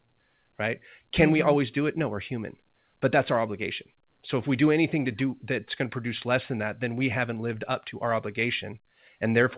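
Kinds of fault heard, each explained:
No faults are present in this speech, which has come over a call link with nothing above 4 kHz, a band limit that points to a narrowband telephone codec of the G.711 kind.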